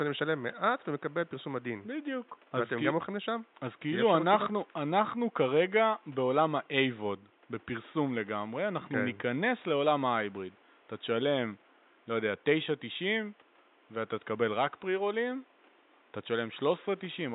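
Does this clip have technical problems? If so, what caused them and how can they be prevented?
No, there are no technical problems in this clip.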